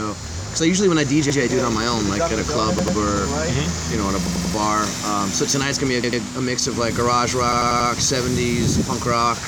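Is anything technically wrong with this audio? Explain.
Yes. A repeated buffer occurs at 1.30, 2.79, 4.27, 6.04 and 7.52 s. Late data made the device replay the same 93 ms piece, which fits a 4096-sample buffer. It is heard one to four extra times as a stutter with hard joins.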